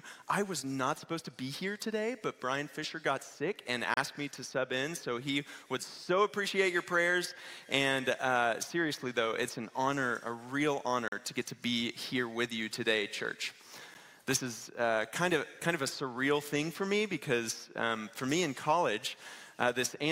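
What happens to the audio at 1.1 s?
Nothing goes wrong at 1.1 s; the audio runs through that moment intact, with no dropout, click or other fault.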